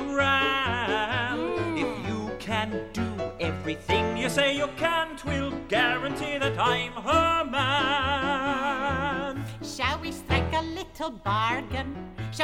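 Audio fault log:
No fault is logged for this clip.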